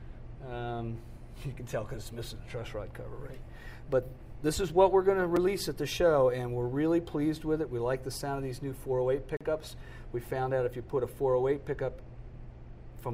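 Two short dropouts show up, at 5.36 s and again from 9.37 to 9.41 s, exactly 4 s apart. That's a gap between stream segments: the segment timestamps don't quite meet, so the player pads silence. The first is a 5 ms hole; the second is a 38 ms hole with hard edges.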